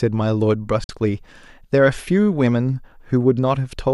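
At 0.84 s a digital broadcast dropout occurs: frames stop arriving intact, so the receiver mutes rather than play corrupt data. The speech fades out in 3 ms to a silent hole until 0.90 s, which fits two lost frames, and that audio is gone.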